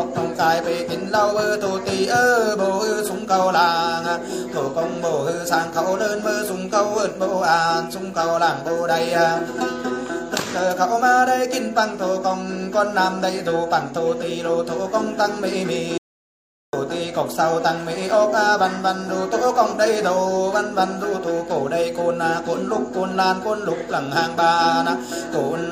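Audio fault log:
15.98–16.73 s, audio dropout to silence: the input feeding the recorder was likely lost for a moment, through a disconnected device, a broken link or an accidental mute, while writing carried on with silence. The sound stops abruptly mid-flow and returns just as suddenly after about 0.75 s. The gap is dead silence with no trace of room tone, and whatever was happening during that stretch is simply absent.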